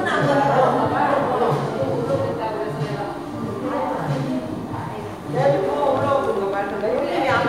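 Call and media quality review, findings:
Train of clicks, 5.87 to 6.99 s: about ten sharp, near-identical pulses at roughly 7 per second, uneven spacing, peaking about 5 dB above the surrounding sound. Probable component: external interference or a faulty connection or power supply, likely injecting repeated pulses onto the line. Unlike codec crackle or dropout gaps, nothing is removed from the sound. Each click sits on top of it with the same shape, and the burst stops after about a second.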